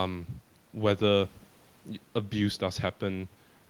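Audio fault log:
No fault to log in this speech clip.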